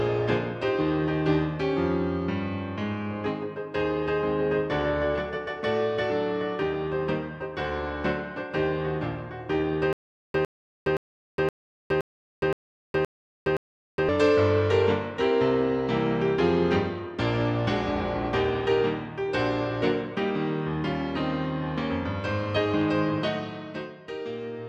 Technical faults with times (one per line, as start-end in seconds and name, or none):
9.93-14.09 stutter with silent gaps